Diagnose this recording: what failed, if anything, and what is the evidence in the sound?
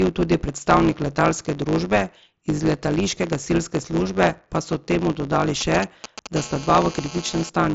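Block size mismatch (truncated) in the driver or buffer stage: a 100 Hz buzz throughout, with speech running 1.09 times fast at normal pitch. Block ends are discarded, leaving vertical seams every 10 ms on the spectrogram.

GSM signalling bursts in the analogue wiring: just after "so temu dodali", 5.61 to 6.27 s, galloping clusters of short 217 Hz buzzes, roughly 10 dB below speech. They appear as separated comb-like bursts.

GSM phone buzz, also rectified in the analogue wiring: 6.36 to 7.50 s, a steady raspy 217 Hz buzz, about 15 dB below speech. It forms continuous harmonic stripes up to the mSBC band edge near 7.7 kHz.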